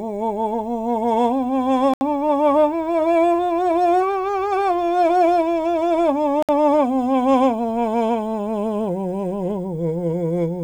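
A likely Bluetooth stall, where held-up packets let the headphones' buffer run dry, cuts the music to silence twice: for about 74 ms at 1.94 s and about 62 ms at 6.43 s, each time pausing abruptly before playback picks up again.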